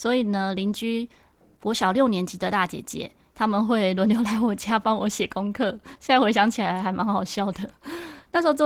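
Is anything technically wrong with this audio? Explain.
Yes. Throughout the speech, Opus voice compression at a rate that fits about 16 kbps codes the excitation coarsely, audibly roughening the speech, which sounds hoarse and slightly robotic.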